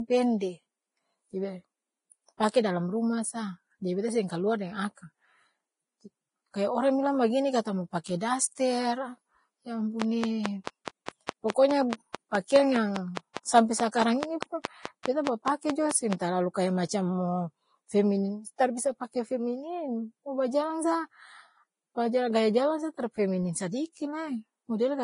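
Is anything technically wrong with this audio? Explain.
Yes. The speech has three kinds of fault.

Throughout, there is heavy Vorbis compression. Nothing is heard above 10.6 kHz, and the treble is coarsely quantised into hissy, grainy noise. This likely comes from a low bitrate, roughly 28 kbps.

From 10.02 to 16.14 s, a train of clicks ticks over the speech, pauses included. There are around thirty clicks, evenly spaced at 4.75 per second, and they stand about 20 dB above the signal. They stop just before "talalu kaya macam". Interference or a faulty connection or power supply would inject pulses like these.

Pre-echo occurs at 11.26, 13.15 and 15.03 s. A short hiss of 24 to 26 ms runs ahead of each sharp attack. The codec spread each block's noise into the quiet moment before the attack, so the onset sounds smeared.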